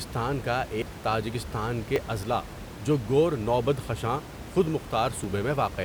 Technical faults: dropped buffer (overrun)

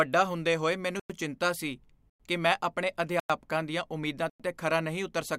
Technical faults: gap between chunks

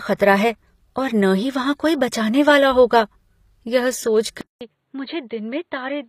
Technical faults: HE-AAC compression; input switched to a poorer device

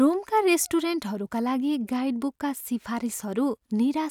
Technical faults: none

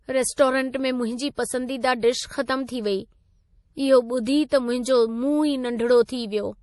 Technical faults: MP3 compression; pre-echo

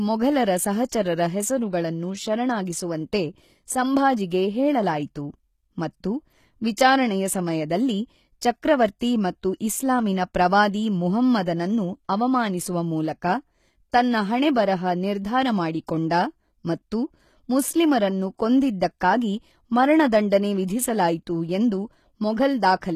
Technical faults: HE-AAC compression; pre-echo

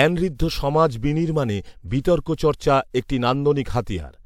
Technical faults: none

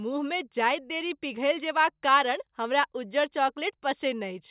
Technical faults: none

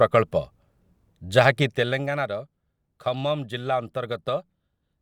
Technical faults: none

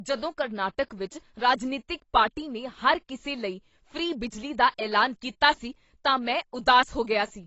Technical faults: AAC compression

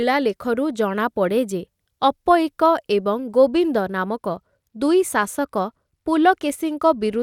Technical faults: Bluetooth SBC bit pool drop

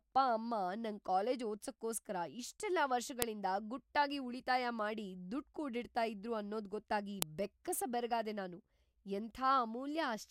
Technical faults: file header played as audio

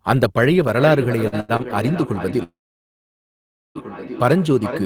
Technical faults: feedback echo between two devices; short stall from a late packet; call audio freeze

